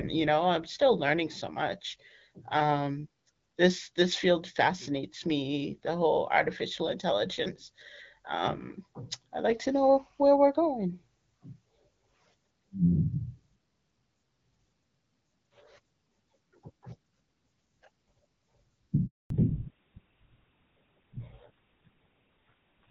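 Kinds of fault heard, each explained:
Handover gap: as the call switched networks, no speech frames got through, so the sound drops out at 19.06 s and stays silent for 240 ms until 19.30 s. A waveform shows a short fade to a flat line; a spectrogram shows a blank vertical band.
Fallback to narrowband: right after the gap, the call leaves HD Voice, which points to roughly 12.65 kbit/s AMR-WB, for the older GSM full-rate codec. From 19.30 s to the end, nothing remains above 4 kHz, so speech sounds duller and rougher. A spectrogram shows the upper band abruptly emptied above a hard line at 4 kHz.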